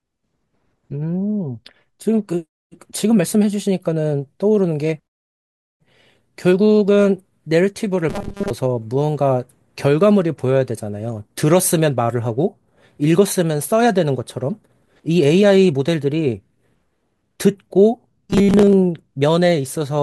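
Robotic sound from repeated short buffers hits this speech clip from 8.09 to 8.50 s and from 18.30 to 18.73 s: a rigid, metallic 200 Hz buzz, likely from audio arriving too seldom, so a roughly 5 ms slice repeats, replacing most of the real sound.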